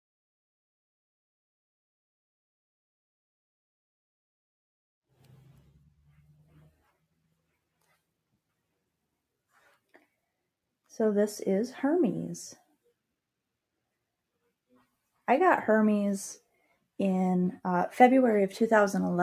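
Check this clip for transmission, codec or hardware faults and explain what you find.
Sound cut by the noise suppressor at 5.77–6.81 s and 7.0–7.52 s: the suppressor mistook wanted sound for noise, pulling steady parts down by about 15 dB and about 22 dB.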